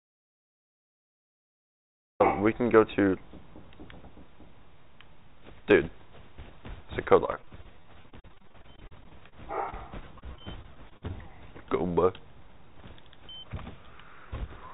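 Audio dropout to silence runs from the start of the clip to 2.2 s. The file opens on silence with no room tone. The input was likely lost, through a disconnected device, failed link or stray mute, while recording continued, and the sound enters abruptly when it returns.

Repeated packet loss (robotic sound) occurs from 7.26 to 9.34 s and again from 9.70 to 11.11 s. Packets kept arriving lost or late, and each hole, the longest about 40 to 46 ms, was patched by extending the previous sound. This gives a choppy texture with fragments missing. Concealment fills roughly a quarter of the first stretch and about a seventh of the second. Throughout, the sound is cut off above 4 kHz, which fits a narrowband G.711 call path.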